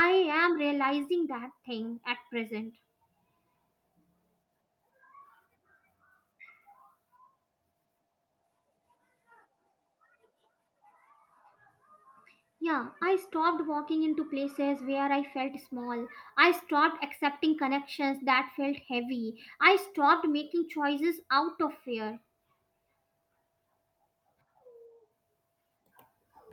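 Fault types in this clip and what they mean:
No technical fault can be heard anywhere in this speech recording. There is nothing here that calls for a line of its own.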